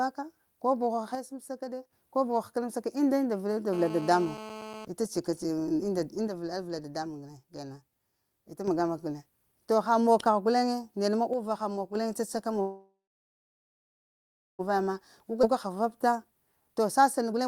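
From 1.15 to 1.93 s, just before "ko buha həkənamsaka", the level drops abruptly by about 6 dB and then recovers. This pattern points to a likely case of one channel dropping out of a stereo pair before the mono sum, so only half of the shared signal remains. Unlike a fade or gain ride, the change is a sudden step with no ramp. The same step recurs from 6.28 to 8.68 s and from 11.33 to 11.95 s.

Between 3.73 and 4.85 s a GSM phone buzz sits under the speech at about 13 dB below it. This is a hard, raspy tone at 217 Hz with a dense stack of harmonics. A nearby 2G handset's bursts are being rectified by the audio circuitry. Because the buzz holds steady throughout, the phone was in a call rather than a data transfer. Its fixed 217 Hz pitch and gritty edge distinguish it from smoother 50 or 60 Hz mains hum.

From 12.61 to 14.61 s the audio undergoes a call audio freeze. The last sound is stretched out and dies away, leaving about 1.6 s of silence, and then speech resumes exactly where it stopped. 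This is likely a jitter buffer running dry while packets were held up. About 2 s of filler was inserted and nothing was lost. That distinguishes it from a skip, where material vanishes instead of being paused.

A skip ahead occurs from 15.42 to 15.45 s. Playback leaps over roughly a second of material, joining the two sides with only a few milliseconds of fill. Here the lost audio was dropped while later audio was already waiting. The result is a near-seamless splice with a chunk of content missing, the opposite of the freeze just before it, which added time and lost nothing.

Overlapping that jump, from 15.31 to 17.46 s, a jitter buffer speed-up runs the audio at about 111% of normal speed while keeping its pitch. Many pitch-period-sized slivers, about a third of a second in total, are cut out to drain excess buffered delay. The speech sounds hurried but not higher. That unchanged pitch separates it from a simple playback-rate error, which would raise the pitch along with the tempo.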